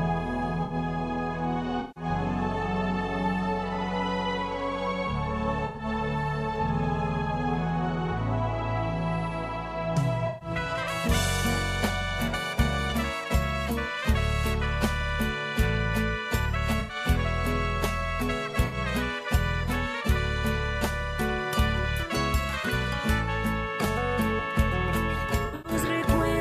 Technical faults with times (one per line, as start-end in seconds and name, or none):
0.63-0.74 corrupt frame concealed
1.80-2.04 corrupt frame concealed
5.65-5.85 corrupt frame concealed
10.27-10.49 corrupt frame concealed
12.90-12.96 corrupt frame decoded
16.80-16.95 corrupt frame concealed
18.65-18.76 corrupt frame concealed
25.45-25.73 corrupt frame concealed